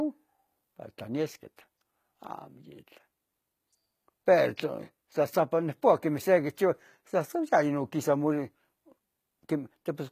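From start to finish the speech shows the signature of HE-AAC compression, likely at a low bitrate, where the codec sends only the lower spectrum and synthesises the treble by copying lower bands upward under a coarse envelope. The damage is plainly audible: s sounds come out gritty and metallic because the rebuilt harmonics no longer line up with those below, the treble sounds artificial, and nothing remains above 14.9 kHz, which fits a bitrate around 20 kbps.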